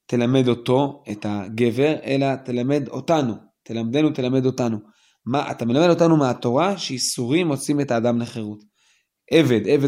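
No technical faults are audible.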